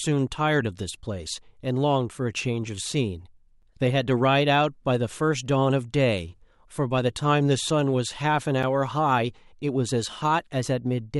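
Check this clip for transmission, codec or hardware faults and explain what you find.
There is one fault: a gap between chunks, heard twice in the speech, at 3.62 s and 8.63 s. Each is a brief hard-edged hole of about 7 ms, heard as a short hole or dip rather than a pause. The two holes sit exactly 5 s apart, which points to audio carried in 5-second chunks with a sliver of silence inserted at each join. Nothing is lost; the flow is simply broken at the boundaries.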